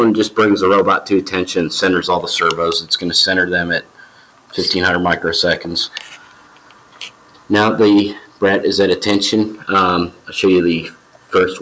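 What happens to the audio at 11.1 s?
A sound cut by the noise suppressor runs from 10.90 to 11.32 s. A speech-tuned suppressor mistakes this stretch for noise and pulls it down by as much as about 11 dB, so the sound sinks and its decay is cut short for roughly 0.4 s.

That dip sits inside a wider fault: a noise suppressor applied to music or sounds is active throughout the clip. Because it treats sustained and fading material as noise, the level swings by around 10 dB. Held sound and tails sink while attacks pass, which gives the audio a pumping, thinned-out quality around 11.1 s as well.

Hard clipping is also present the whole way through, including this moment. The signal is driven about 11 dB past what the stage can pass, so a few percent of samples have their peaks sheared flat. The flattened tops add high harmonics that are heard as harsh fuzz on louder moments.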